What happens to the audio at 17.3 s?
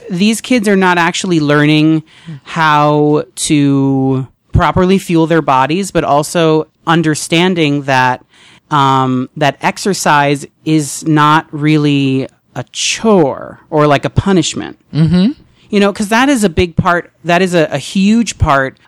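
At 17.3 s the speech carries hard clipping, present across the whole clip. The signal is driven about 6 dB past what the chain can pass, so peaks are cut flat. Under one percent of samples hit that ceiling, giving crackle on the loudest moments.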